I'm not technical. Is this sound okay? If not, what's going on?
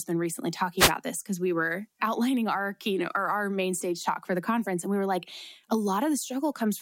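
No. From 0.77 to 0.92 s, just after "been recently", there's a wireless microphone noise hit: the radio signal briefly faded, producing a short burst of static before "this because we were".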